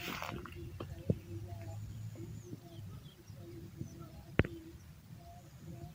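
Nothing in the audio stood out as a technical fault on listening.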